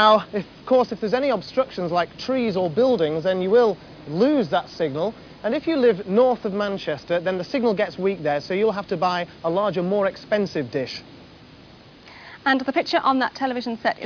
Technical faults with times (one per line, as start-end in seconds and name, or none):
none